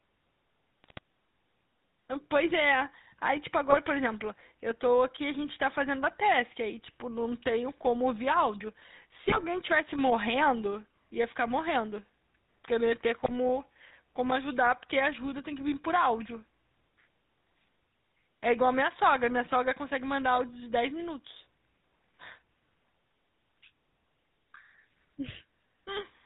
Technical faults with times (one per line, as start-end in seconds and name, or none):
0.00-26.25 GSM full-rate codec
0.84-0.99 GSM bit errors
3.70-3.77 GSM bit errors
9.28-9.44 GSM bit errors
13.20-13.31 GSM bit errors